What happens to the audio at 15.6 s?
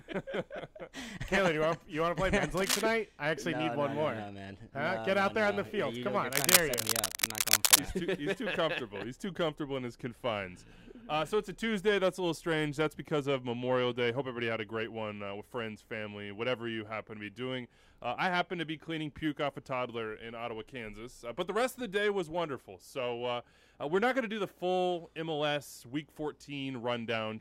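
Nothing goes wrong at 15.6 s; the audio runs on intact through that moment, with no dropout, click, glitch or other fault to be heard.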